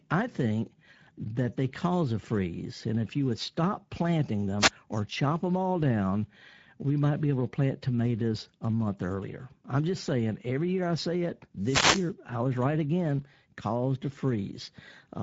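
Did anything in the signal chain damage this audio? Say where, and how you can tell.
Yes, two stages left marks. At the codec stage, the speech carries plainly audible Speex codec damage for the whole clip: a hoarse, noisy grain where the CELP coder lacks bits to rebuild the excitation cleanly. The sound points to a wideband mode of roughly 16.8 kbps. On a spectrogram, energy stops sharply at 7.7 kHz with an empty band above, and harmonic striations look smeared and noisy rather than crisp.

At the radio link ahead of the recording, there are two wireless microphone noise hits, from 4.59 to 4.71 s and from 11.59 to 12.12 s. Each is a swish of static as the FM signal fades and receiver noise rises over the speech, and the second is longer. A spectrogram shows broadband noise patches spanning the full band at those times. The waveform shows grainy, irregular bursts in place of the normal speech envelope.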